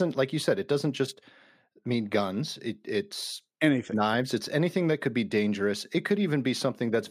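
No technical faults are audible.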